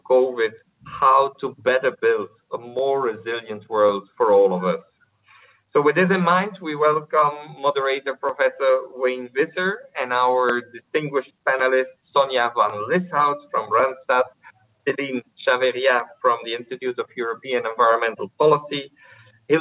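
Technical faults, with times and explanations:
No technical faults can be heard in the clip. The audio has come through a call path whose narrowband sound fits G.711 A-law coding at 64 kbps, with nothing reaching above 4 kHz.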